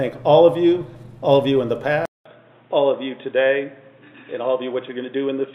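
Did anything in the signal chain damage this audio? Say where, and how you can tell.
Yes. An input switched to a poorer device at 2.06 s, lasting to the end of the clip. After a 200 ms silence the sound turns dull and boxy, with nothing above 3.8 kHz, and new background noise appears roughly 40 dB below the signal while the level stays about the same. The stage is the capture device and driver, likely the system changing to a narrower-band microphone or headset profile mid-recording.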